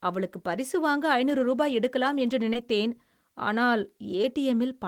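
A speech recording with short concealed packet loss at 2.53–2.57 s: about 20 ms went missing, and the receiver filled 13 ms by extrapolation, leaving a brief smear.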